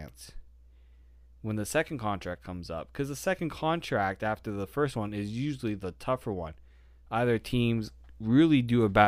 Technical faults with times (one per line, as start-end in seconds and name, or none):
none